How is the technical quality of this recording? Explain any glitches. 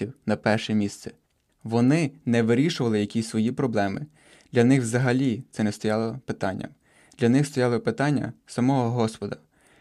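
Nothing in the recording stood out as a technical problem on listening, so there are no glitches to explain.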